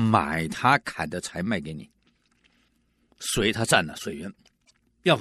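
A speech recording with damaged data in a compressed stream from 4.61 to 4.71 s. Corrupted bytes make the decoder misread frames and hunt for the next header, producing a decoding glitch rather than a plain analogue dropout.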